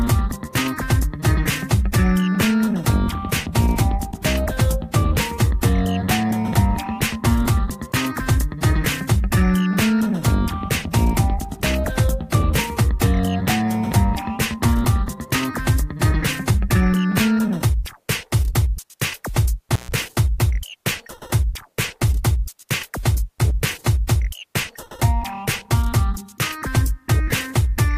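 At about 19.72 s there's a short intermittent contact fault that runs to roughly 19.92 s. It sounds like a loose cable or plug briefly losing its connection. The signal drops out for around 134 ms, with crackle at both edges where the contact breaks and then remakes. While the line is open you're left with a faint hiss before the sound comes back.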